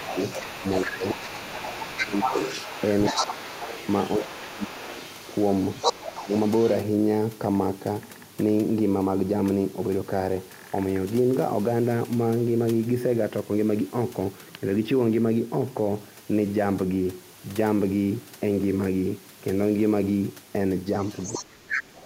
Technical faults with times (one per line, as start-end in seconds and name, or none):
0.00-0.17 speech suppressed in double talk
0.00-6.77 other side's voice leaking through
0.62-2.35 speech suppressed in double talk
3.13-3.53 speech suppressed in double talk
4.19-4.94 speech suppressed in double talk
6.02-6.32 speech suppressed in double talk
21.00-22.05 other side's voice leaking through
21.38-21.93 speech suppressed in double talk